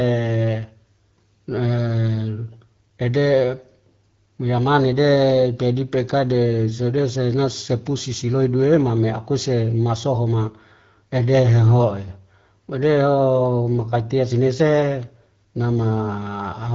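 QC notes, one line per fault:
No faults heard.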